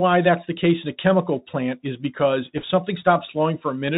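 From the start, the speech carries a Bluetooth CVSD headset codec sound: nothing above 4 kHz, scratchy s sounds, and a granular hiss from its one-bit, adaptive-step encoding. From 2.57 to 2.64 s, bit errors on the Bluetooth voice link at a rate of roughly one or two percent add a brief rushing crackle rather than loud clicks.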